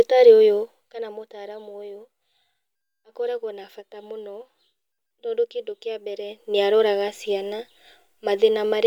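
Nothing in this speech recording stands out as a technical problem.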